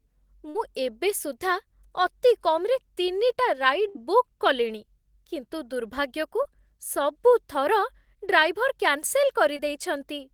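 At 0.49 to 0.57 s, just before "ଏବେ ସୁଦ୍ଧା ଅତି", a burst of packet loss drops a run of audio the receiver never got in time. It covers the hole by extending the last sound for about 51 ms while fading it, then jumps ahead, so roughly 60 ms of the speech is simply gone. The same happens at 3.89 to 3.97 s, leading into "ବୁକ୍ କଲିଣି କିନ୍ତୁ ଦୁର୍ଭାଗ୍ୟକୁ", with about 61 ms of stretched, dying sound standing in for 60 ms that never arrives.

Three briefer cases of short concealed packet loss follow. At 6.43 to 6.47 s, right after "ବୁକ୍ କଲିଣି କିନ୍ତୁ ଦୁର୍ଭାଗ୍ୟକୁ", then at 7.29 to 7.33 s and 9.57 to 9.60 s, about 20 ms of audio fails to reach the decoder. Each time the receiver synthesises roughly 17 to 21 ms of continuation from the preceding sound and blends back into the real signal. The result is a quick smear or wobble rather than an obvious gap.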